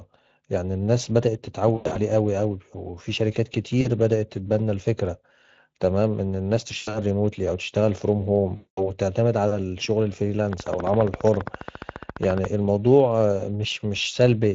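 Throughout, the Speex codec's bitstream carries too few bits for the excitation, which points to a setting of around 20 kbps, so the speech sounds noisy and hoarse. At 1.75–1.99 s, 3.81–3.88 s, 6.77–6.98 s and 8.55–8.90 s, VoIP packet loss is concealed by the speech codec: the decoder stretches its last pitch and filter, turning the speech into a fading buzzy tone or coloured noise. From 10.53 to 12.46 s, a train of clicks, likely interference or a faulty connection, ticks regularly at 14.6 per second, about thirty in all, peaking about 15 dB above the speech.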